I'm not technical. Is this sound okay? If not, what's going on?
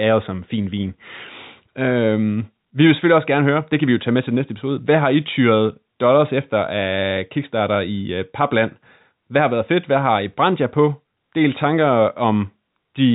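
Yes, the speech is fine: it has passed through ordinary telephone coding, so nothing above about 3.8 kHz comes through and it has the narrow, phone-line tone you would expect from a call.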